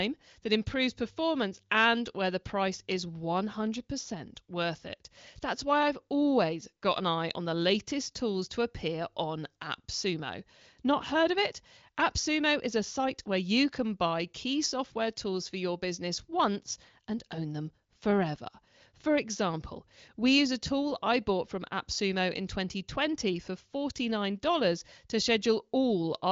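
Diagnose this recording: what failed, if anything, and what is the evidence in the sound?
Nothing in this speech recording points to a failure at any stage. It carries the sound of the AMR wideband (HD Voice) codec working at a high rate, which fits 23.05 kbit/s, with nothing above 7.5 kHz and at most a faint trace of coding roughness.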